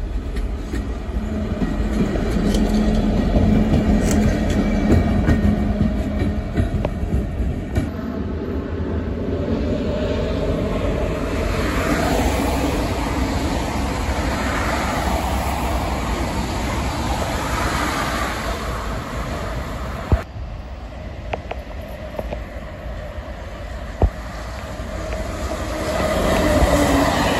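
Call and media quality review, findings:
No audible faults found.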